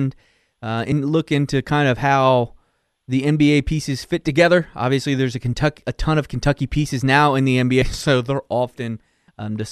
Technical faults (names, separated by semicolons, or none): compressed frames skipped